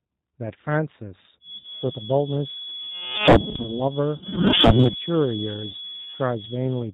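Throughout, the speech has a rough, slightly synthetic edge, with nothing above 4 kHz. This is G.729 codec coding, which fits a G.729A stream at 8 kbit/s. The decoder does not carry the waveform itself. It rebuilds each 10 ms frame from a vocal tract filter, a pitch predictor and a handful of pulses, so the timbre comes out grainy and band-limited, and the damage is plainly audible.

From 1.39 s to the end, a thin, steady whistle near 3.4 kHz sits behind the speech, roughly 10 dB below it and swelling and fading slowly in level. This sounds like a feedback whistle. The likely cause is a loudspeaker-to-microphone loop held just at the edge of feedback, where one frequency keeps ringing without building up into a howl.

From 1.58 to 1.86 s, the speech smears into a buzzy tone or a coloured noise that fades. It stays weak or distorted for a while after clean audio should have returned. This is VoIP packet loss concealed by the speech codec. 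About 60 ms of audio went missing, which fits three 20 ms packets. The decoder filled the gap by extending its last pitch and filter settings at falling gain, and because each frame builds on the one before, the damage outlasts the gap. The same smearing occurs from 4.17 to 4.51 s, covering about 40 ms lost, and more briefly from 5.71 to 5.75 s, covering about 20 ms lost.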